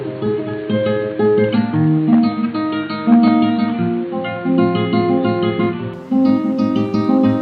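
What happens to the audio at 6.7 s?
Nothing goes wrong at 6.7 s: the audio plays through that moment intact, with no dropout, click, glitch or other technical fault.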